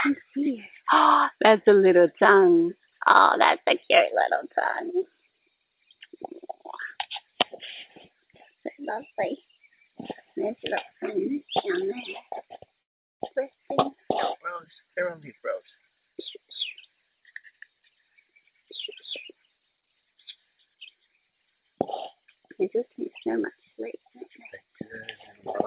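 The audio comes through a narrowband call path with nothing above 4 kHz, which fits a G.711-style call codec. A call audio freeze runs from 12.82 to 13.22 s. The sound stalls for about 0.4 s, and almost all of it, some 370 ms, is silence. Nothing appears to be lost, so a gap has simply been pushed into the stream. The likely cause is delayed packets leaving the jitter buffer empty until they arrive. A skip ahead follows at 13.34 to 13.37 s. Playback jumps forward with almost no gap. Roughly a third of a second of audio is gone, and the two sides are butted together. This drops the backlog that built up during the stall. A jitter buffer slow-down spans 14.54 to 15.16 s. The audio plays at 92% speed with unchanged pitch. Repeated pitch periods add 54 ms, so sounds stretch out slightly. The receiver is rebuilding its reserve. Jitter buffer speed-up then occurs twice, from 15.38 to 16.43 s and from 16.87 to 17.53 s, both at 110% speed. 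Short pitch-period slices are cut out, about 100 ms and 70 ms in total. The sound is hurried but keeps the same pitch.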